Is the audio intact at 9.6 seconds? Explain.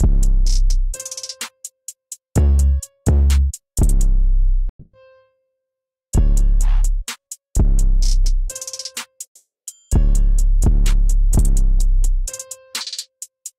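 No, 9.6 seconds sits inside a long network dropout running from 9.25 to 9.70 s. The stream likely stopped arriving, so the receiver stretches the last sound into a fading buzz, then about 0.28 s of silence, and playback resumes with roughly 0.42 s gone.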